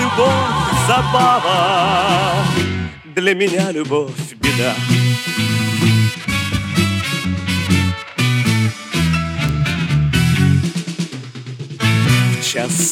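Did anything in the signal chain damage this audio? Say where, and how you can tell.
Yes. A digital stage, most plausibly memory or a serial link carrying the samples, flipped single bits, producing three bit error spikes at 1.59 s, 9.49 s and 10.66 s. Each lasts one sample, jumping to about -9, -3 and -15 dBFS respectively before snapping straight back. Because the corrupted value shifts by a power of two and ignores the surrounding waveform, each is heard as an isolated sharp tick with broadband content.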